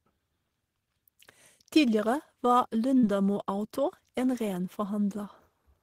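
At about 2.98 s a short smear passes through the speech, a wobble lasting until roughly 3.04 s before the real signal returns. This is short concealed packet loss: around 50 ms of audio failed to reach the decoder in time, and the receiver covered the gap by extending the preceding sound for about 43 ms, then crossfaded back into the arriving audio, leaving that brief blurred patch.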